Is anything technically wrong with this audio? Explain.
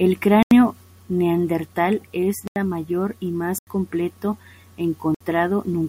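Yes. The speech has four blocks of digital silence: at 0.43–0.51 s just before "neandertal es", at 2.48–2.56 s right after it and before "mayor y", at 3.58–3.67 s just after "mayor y", and at 5.15–5.21 s. The first three last about 85 ms each, which fits an output buffer of 4096 samples that wasn't filled in time and was left as zeros. The last lasts about 60 ms. The sound drops straight to silence and comes back with no fade, so each one is heard as a short hole. That abrupt edge into dead silence is what sets it apart from a faded dropout or a smoothed-over gap.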